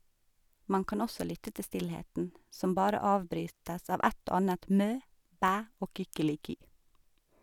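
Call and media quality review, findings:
Block of digital silence at 5.48 s, right after "annet mø". Heard as a tick or dip. Level drops abruptly to silence for about 2.7 ms and snaps back with no fade. Length fits a 128-sample output buffer left unfilled in time.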